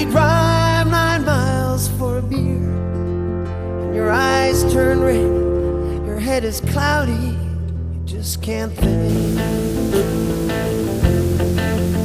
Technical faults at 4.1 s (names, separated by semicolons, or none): none